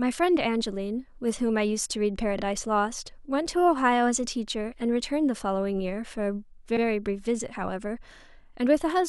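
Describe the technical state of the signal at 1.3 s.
At 1.3 s the speech signal is intact, with no audible technical fault at that moment.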